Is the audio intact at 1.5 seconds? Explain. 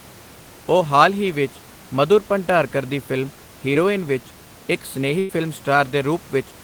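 Yes, the audio is intact at 1.5 seconds; the speech carries through cleanly there, with only the room's own background noise sitting about 23 dB beneath it.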